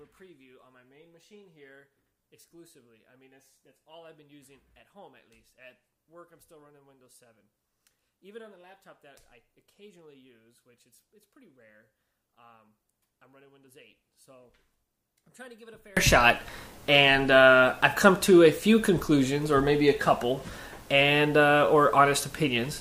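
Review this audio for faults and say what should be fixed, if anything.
From 0.0 to 15.97 s the audio sits about 34 dB below the rest of the clip, leaving only a residual copy of the sound. After 15.97 s the full level returns. This is likely one channel inverted: with one side's polarity reversed, everything common to both channels cancels in the mono sum and only their differences remain. On a waveform the opening section is a thin sliver that widens abruptly at 15.97 s. A spectrogram shows the same band-wide dimness, then a clear jump. To prevent it, check channel polarity or mono compatibility before summing to mono.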